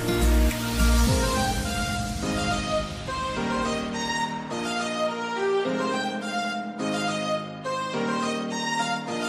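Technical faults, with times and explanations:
No technical faults detected.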